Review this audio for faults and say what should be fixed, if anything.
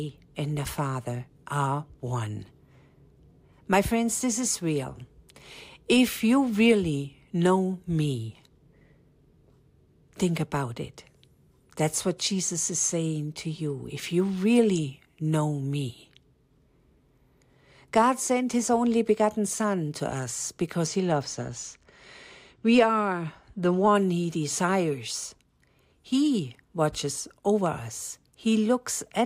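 Channel delay (comb filtering), 20.87–23.95 s, between "to us" and "he desires": a two-sample lag cancels around 10 kHz in mono, dulling speech; unlike low-pass filtering, energy returns above that notch. Align both channels sample-accurately before any mono fold-down.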